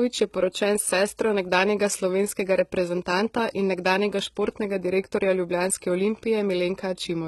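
All the way through, the speech has gritty, lispy s sounds and nothing above 11.8 kHz, likely from heavy HE-AAC compression at a very low bitrate, maybe around 16 kbps.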